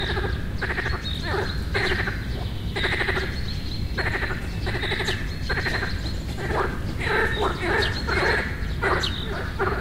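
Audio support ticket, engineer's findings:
No faults found on listening; playback of the everyday sound is continuous, with no dropouts, distortion or level problems to trace to any component.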